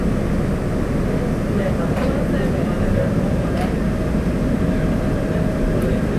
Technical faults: none

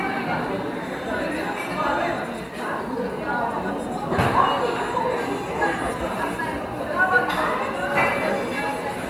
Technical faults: none

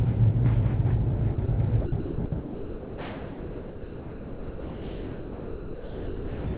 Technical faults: sound dropped by the voice detector

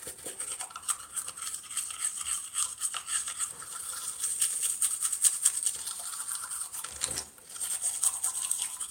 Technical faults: clock drift between sender and receiver; repeated timing corrections

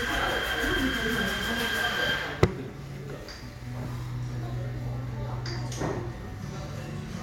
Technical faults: lost LE Audio frames

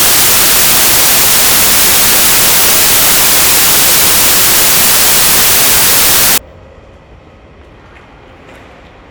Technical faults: samples built from the wrong bytes

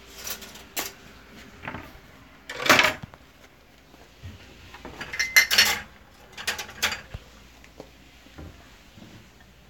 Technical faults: none

